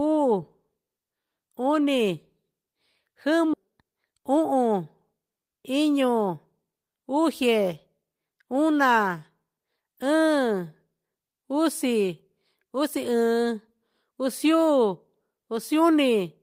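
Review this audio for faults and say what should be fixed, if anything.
A skip ahead at 3.53 to 3.55 s: a stretch of speech, roughly 0.4 s, was dropped while later audio was already waiting. Playback jumps straight across the gap with nothing filled in, so part of the speech vanishes and the two sides butt together. Sizing the jitter buffer to absorb bursts, so it never overflows and drops queued audio, would prevent this.

A jitter buffer speed-up at 4.12 to 4.52 s: with too much audio still held, the receiver trimmed short pitch-period pieces repeatedly, removing a few tens of milliseconds. Speech runs at about 108% speed at unchanged pitch, sounding hurried. Spreading delay reduction more gently over time would make this inaudible.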